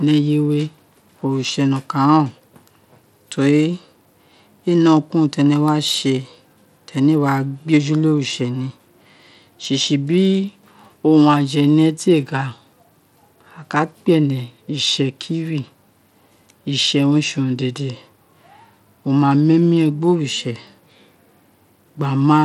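It's a speech recording with Bluetooth SBC compression damage running the whole way through, and it's plainly audible. The top end flickers and thins out, and there's a gritty, aliased roughness riding on the sound. That's likely the SBC codec squeezed into a small bit pool, which fits a rate of around 96 kbps. The weaker high sub-bands get starved of bits while the rest are coarsely quantised, and nothing survives above about 19.1 kHz.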